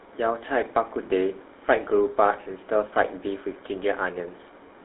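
The speech has been passed through the GSM full-rate codec for its whole length, a coding rate that fits the original 13 kbps mobile standard. The codec models the vocal tract and excites it with a sparse, regularly spaced pulse train, so the speech takes on a buzzy, gravelly roughness that is plainly audible. The line band also runs only from about 250 Hz to 3.7 kHz, thinning the low end and dulling the top.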